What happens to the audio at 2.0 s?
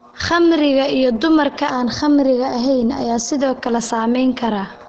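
At 2.0 s you're inside a stretch of channel delay (comb filtering) that runs from about 1.70 s to 3.39 s, starting right after "iyo dumarka". One channel trails the other by a tiny amount, roughly a fifth of a millisecond, and once the two are folded to mono the shared content cancels at evenly spaced frequencies, the first notch landing somewhere around 3 kHz. That carves a fixed gap out of the upper mids, so the speech goes hollow and a bit phasey.

Underneath that, and across the whole clip, there's heavy codec damage that sounds like Opus compression, most likely running at about 12 kbps in its SILK speech mode. Nothing comes through above 8.9 kHz, so the top end is cut off, and the speech has that muffled, hoarse texture you get when a low-rate speech coder is squeezing wideband audio. At 2.0 s the comb notches stack on top of that dullness.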